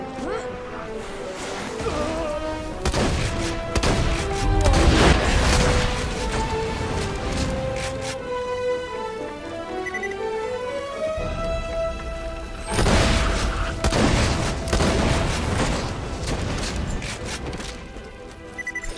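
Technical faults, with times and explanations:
No technical faults can be heard anywhere in the audio, and the signal stays steady and intact throughout.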